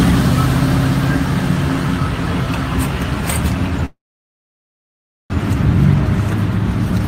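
At 3.85 s the sound freezes and stays frozen until 5.33 s, a call audio freeze. A brief continuation of the last sound, a buzz or hiss, fades out, leaving about 1.33 s of silence, and then the audio picks up exactly where it broke off. That last point separates it from a dropout: nothing is skipped, and everything after arrives about 1.45 s late. The likely cause is packets stalled in transit, draining the jitter buffer.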